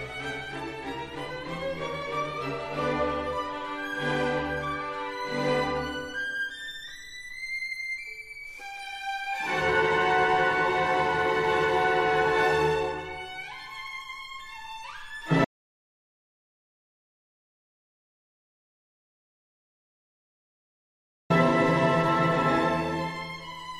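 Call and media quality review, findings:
Audio dropout to silence, 15.45 s to 21.3 s, roughly 5.9 s gone. Sound cuts off mid-flow and comes back the same way; the gap is dead silent, no room tone at all. Likely input loss upstream (device unplugged, link dropped or a stray mute) while the recorder kept writing zeros. Whatever happened in that stretch isn't recoverable, so worth chasing the capture chain.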